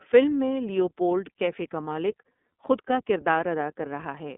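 Throughout the speech, the iLBC codec limits the band to roughly 200 Hz to 3.5 kHz, with nothing above 3.7 kHz. Each 30 ms frame's excitation is coded independently, which fits the 13.33 kbps mode, leaving plainly audible roughness and a synthetic, buzzy edge.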